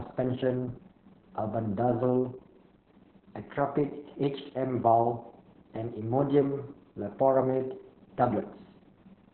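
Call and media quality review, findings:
Opus voice compression, throughout the speech. Muffled, hoarse, slightly robotic, nothing above 4.4 kHz. Narrowband SILK coding with coarse excitation, which fits roughly 6 kbps. A plain telephone-band filter would be dull but clean. Here the grainy, buzzy texture marks codec damage, not just bandwidth loss.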